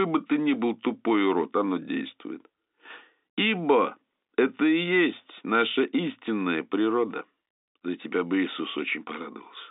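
There are no technical faults to describe in time order in this telephone-band speech.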